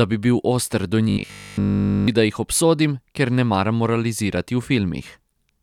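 This speech clip has robotic sound from repeated short buffers between 1.10 and 2.08 s. The voice becomes a rigid, metallic buzz at 50 Hz. All of that stretch is repeated material. The likely cause is late-arriving audio, with 20 ms blocks repeated to fill the gap.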